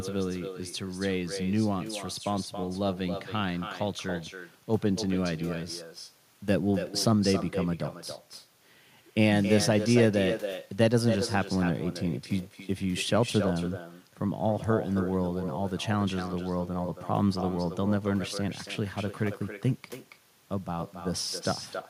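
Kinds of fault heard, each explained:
Echo with no canceller: the far loudspeaker leaks into its microphone unremoved, so the talker's speech returns roughly 300 ms later, thinner and about 11 dB quieter.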